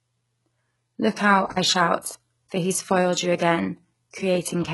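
Throughout the speech, the treble is rebuilt rather than real, with nothing above 11.5 kHz and heavy codec damage. This is likely HE-AAC compression, fitting a bitrate near 12 kbps. Sibilants sound gritty and metallic. From 1.50 to 1.57 s, an intermittent contact opens the line for about 42 ms. The sound drops out with crackle at both edges, leaving faint hiss.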